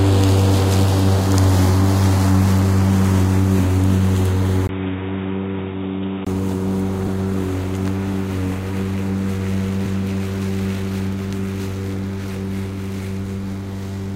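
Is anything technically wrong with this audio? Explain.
Yes, there are two kinds of fault.

From 4.67 to 6.27 s the audio turns duller, which points to the input likely having switched to a poorer device. The replacement path passes nothing above 3.8 kHz, is around 5 dB quieter, and adds its own background noise roughly 30 dB below the signal. On a spectrogram the upper band cuts off at a flat ceiling for that span, with a different noise floor beneath. The waveform shows a 20 ms silence at the switch and a lower envelope afterward.

At 7.06 s and again at 9.85 s there is damaged data in a compressed stream. Corrupted bytes make the decoder misread or reject those frames and lose sync until it finds a valid frame header. Each event is brief and is heard as a chirp, squawk, click or short hole. A spectrogram shows it as a narrow vertical disturbance, either a smear of unrelated energy or a gap. 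The waveform shows a short discontinuity at each time.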